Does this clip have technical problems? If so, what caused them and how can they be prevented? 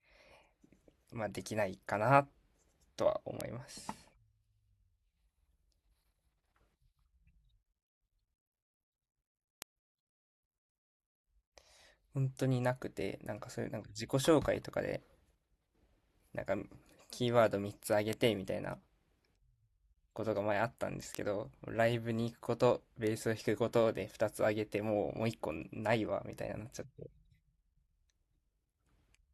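Yes. Five sharp, isolated ticks cut through the speech at 3.41, 9.62, 18.13, 21.15 and 23.07 s, each a broadband click unrelated to the voice, peaking at about -12 dBFS at 3.41, 18.13 and 21.15 s, about -18 dBFS at 9.62 s and about -24 dBFS at 23.07 s. These are bit error spikes: a flipped bit throws one or two samples up by a power of two before the waveform snaps back. Error-checked memory and links, with checksums on transfers, prevent them.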